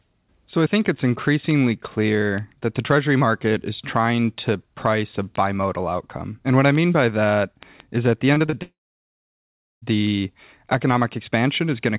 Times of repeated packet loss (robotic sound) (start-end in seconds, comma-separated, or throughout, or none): 8.34-8.54